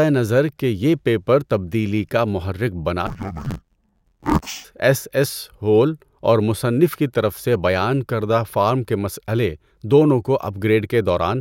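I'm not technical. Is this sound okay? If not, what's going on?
No. From 3.07 to 4.66 s, just after "تبدیلی کا محرک بنا", the speech suffers from interleaved audio read as planar. The left and right samples arrive mixed together, but the system reads them as if each side came in its own separate half. It does this in very short chunks of about 12 ms, which fits a 512-sample block. As a result, the speech turns dull and robotic, with a steady buzz about 86 times per second.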